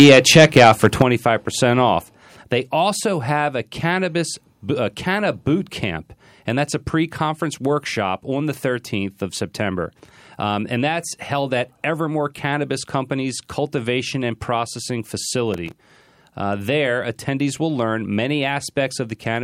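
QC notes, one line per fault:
0.00–1.02 s, microphone overload: the loudest syllables have a harsh, crackling, flattened edge, with peaks pushed about 6 dB past full scale and roughly one sample in twenty clipped. The likely cause is the microphone's input volume set too high, so the converter sliced off each peak's top.
1.02 s and 2.04 s, microphone volume stepped down: voice and background drop together in two sudden steps, first by about 8 dB and then by about 3 dB more, the first coming just as the distortion ends. This is likely the call software cutting the device's input volume after detecting clipping.
15.54–15.96 s, processor overload crackle: a gritty burst of crackle and tearing rides over the speech for under half a second and then stops. Audio buffers of a few milliseconds each missed their deadlines a dozen or more times over that stretch. Each miss repeated a fragment of old audio with hard edges.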